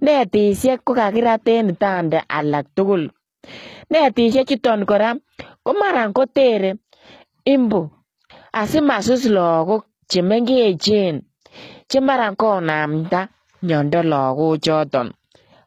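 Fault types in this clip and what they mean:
HE-AAC compression: throughout the speech, s sounds turn gritty and lispy while the treble stays bright, likely from band replication copying lower bands upward at a low bitrate near 20 kbps. Unlike a plain low-pass codec, the highs remain present but sound synthetic.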